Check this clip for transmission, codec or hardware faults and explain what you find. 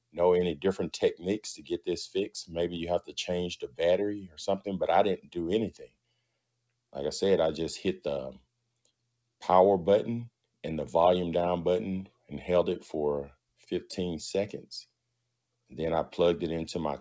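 One fault runs through the clip, and it produces a series of deeper cuts. A noise suppressor built for speech stays active on non-speech sound. The band stops near 8 kHz, which fits a G.722 call path at 64 kbps.

Noise suppressor applied to music or sounds: This lasts the whole clip. The suppressor mistakes held tones, ambience and reverb for noise. Its gain rises and falls by around 10 dB as it decides what to keep. Attacks pass through, while sustained parts drop back. The result pumps and flutters, and the body of the sound thins out.

Sound cut by the noise suppressor: This happens at 0.09 to 1.87 s, 2.46 to 6.94 s, 8.39 to 9.29 s, 12.09 to 12.31 s and 13.29 to 13.68 s. In these stretches the suppressor pushes the sound down harder than elsewhere. The deepest drops are about 21, 21, 22, 16 and 19 dB. The longest span loses roughly one and a half seconds in total. The others lose a few hundred milliseconds or less. 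Decays get chopped short, and steady parts sink in level.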